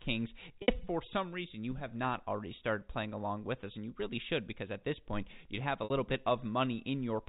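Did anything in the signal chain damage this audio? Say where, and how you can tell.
Yes. Packet loss with pitch repetition, in the network stage, at 0.62 to 0.68 s and 5.84 to 5.90 s. Each 60 ms gap, which fits three 20 ms packets, is filled by repeating the last pitch period. The sound holds briefly on a buzzy, fading tone before normal audio resumes.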